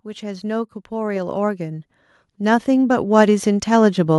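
From 0.05 s to 4.06 s, the level climbs steadily. This is automatic gain rising. The gain control judged the input too quiet and kept turning it up, by about 16 dB in total. The increase is gradual, spread over roughly four seconds, so there is no sudden jump. The speech and the background noise swell together. By the end, the background is plainly louder than at the start.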